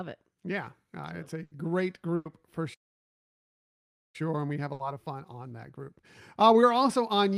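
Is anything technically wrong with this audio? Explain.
Yes. Speech in this clip has three kinds of fault.

Burst of packet loss at 1.43–1.53 s, 2.15–2.27 s and 4.73–4.81 s: lost packets leave gaps of 80, 100 and 60 ms. The receiver fills each gap by continuing and fading the last sound, heard as a held buzz or fading hiss rather than silence, and then skips ahead.

Playback stall from 2.74 to 4.16 s: the output goes silent for about 1.4 s, likely because the player ran out of data or its thread was blocked. The gap is true silence, and far longer than the filled gaps of packet loss.

Time-compressed catch-up from 4.16 to 7.16 s: after the stall, small pieces are cut out and cross-faded to clear the backlog. The speech runs about 1.15 times faster but keeps its normal pitch, which sets it apart from simply playing the audio faster.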